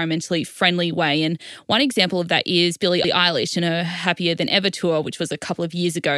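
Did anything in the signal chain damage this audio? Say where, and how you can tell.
Yes. Repeated frames, at the codec or storage stage. At 3.04 to 3.14 s, the same 92.9 ms of speech plays twice, so it stutters. That length points to one compressed frame written or sent again. The repeat adds 92.9 ms to the clip.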